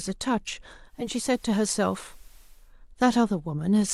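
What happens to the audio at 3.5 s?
Nothing goes wrong at 3.5 s; the speech continues intact through that moment with no dropout, click or distortion.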